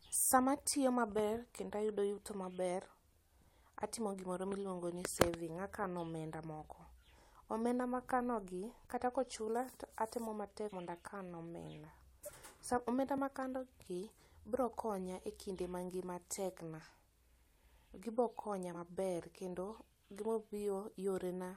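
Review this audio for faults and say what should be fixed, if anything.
Compressed frames skipped at 10.67 to 10.73 s and 12.25 to 12.31 s: the speech jumps ahead by roughly 50 ms and then about 20 ms as whole coded frames go missing or are rejected as damaged. Prevent this by checking the file's integrity after transfer and re-encoding from an intact source.

Block of digital silence at 13.18 s: for 2.9 ms the signal drops out and returns with no fade, heard as a tick or dip. The length fits a 128-sample buffer the program failed to fill in time. Prevent this by enlarging the output buffer or giving the audio thread higher scheduling priority.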